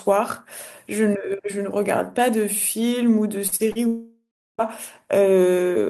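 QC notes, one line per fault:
3.47 to 3.78 s: short concealed packet loss, three times, at 3.47, 3.56 and 3.72 s. About 40 ms goes missing each time, and the preceding sound is extended to bridge the gap before blending back. This gives brief smears or wobbles, not silence, which separates them from a dropout.
3.87 to 4.61 s: long network dropout. About 0.72 s of audio is lost. The last sound is carried on as a fading buzz or hiss, then about 0.36 s of near silence follows before audio resumes further on, with the gap's content gone. The length and the silent tail, unlike the brief patches before it, point to a likely network outage.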